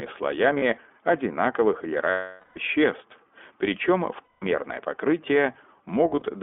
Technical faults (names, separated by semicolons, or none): iLBC codec; lost iLBC frames